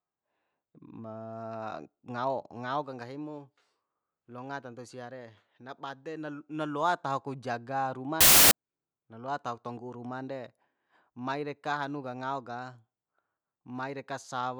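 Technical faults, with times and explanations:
8.21 to 8.51 s, samples built from the wrong bytes: for about 0.3 s the bytes of each sample are misassembled, so low-order bits dominate and the speech becomes loud, harsh broadband noise just before "na loa", showing as a dense waveform block and flat broadband spectrogram smear.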